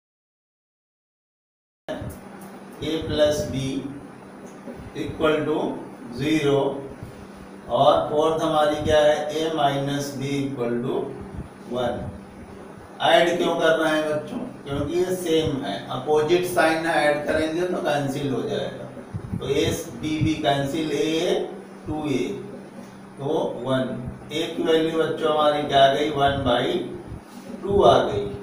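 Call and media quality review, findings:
Cut-off start, 0.00 to 1.89 s. Digital silence, then audio enters abruptly at 1.89 s mid-sound, no attack or fade-in, hard onset edge. Probable component: capture or stream start logic. Mechanism: recording opened late, so the first frames landed after the source was already sounding and the earlier portion was never written.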